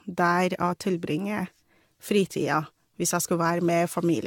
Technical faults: generation loss

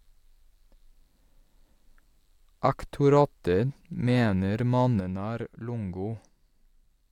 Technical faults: sudden gain jump

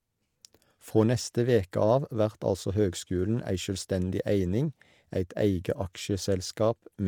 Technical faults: none

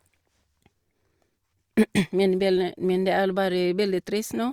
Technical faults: none

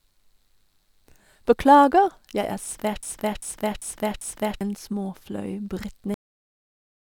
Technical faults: broken-record loop; cut-off end

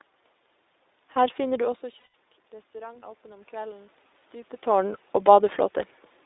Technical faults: iLBC codec; lost iLBC frames; automatic gain rising

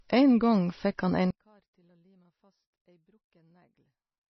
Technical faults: switching supply whistle; MP3 compression; one channel inverted

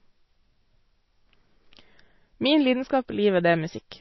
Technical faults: MP3 compression

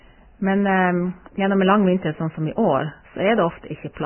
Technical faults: Vorbis compression

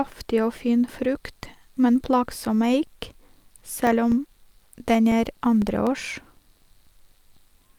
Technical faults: periodic USB or driver dropouts

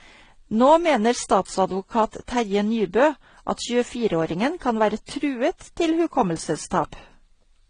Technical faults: transcoding between lossy codecs

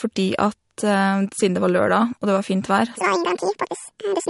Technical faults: MP3 compression; section at the wrong speed

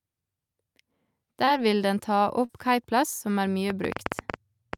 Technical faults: short concealed packet loss; train of clicks

